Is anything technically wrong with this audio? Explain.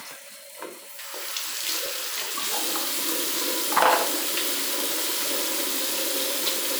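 Yes. From 0.16 s to 5.27 s, a click or pop recurs every 1.7 s, about four times. This is likely clock drift buffer slips. Two unsynchronised clocks differ by around 500 ppm. The buffer between them fills or drains until a few dozen samples are dropped or repeated.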